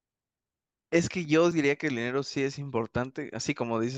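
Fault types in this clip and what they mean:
Overlap between stream segments: Two pieces of the speech stream claim the same stretch of time, and the player trims the shared part as if it had been sent twice. It was not doubled, so real audio is lost. At 1.51 s about 6 ms disappears. The waveform jumps across the gap. This is heard as a single short click or tiny skip. The position fits a stream cut into segments about 2 s long.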